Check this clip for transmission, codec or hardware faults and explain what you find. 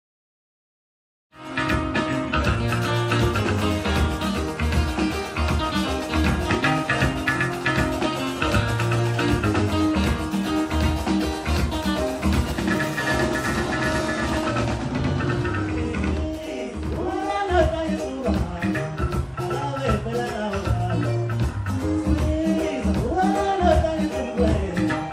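One fault shows up, a channel delay (doubling) from 12.52 to 17.30 s. One channel arrives about 92.9 ms late, which fits a 4096-sample buffer, and the two are summed to mono. The late copy sits at equal level as a distinct slap echo, doubling every attack. The gentle fade-in ending near 1.74 s is an ordinary edit, not a fault.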